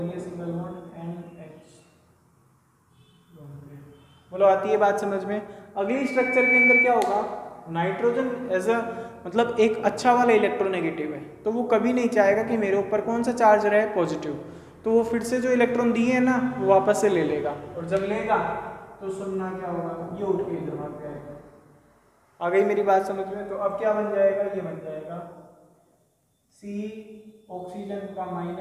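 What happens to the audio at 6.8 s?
At 6.8 s a microphone is picking up the loudspeaker it feeds, and at 2.3 kHz the gain around that loop has climbed above one, so the tone keeps reinforcing itself: loudspeaker feedback squeal. It runs from 5.87 to 6.97 s, swelling over roughly the first 0.7 s into a piercing single-pitched whistle that sits about 5 dB above the rest of the audio. At 6.8 s it is near full strength, just before it cuts off.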